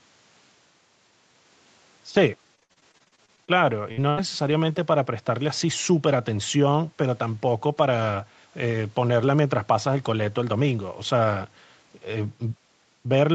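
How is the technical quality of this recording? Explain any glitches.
One glitch stands out in this call-band speech, which stops at 8 kHz. From 2.55 to 4.53 s, repeated packet loss strikes fifteen times. Each gap is patched by stretching the previous sound, giving choppy speech with pieces missing.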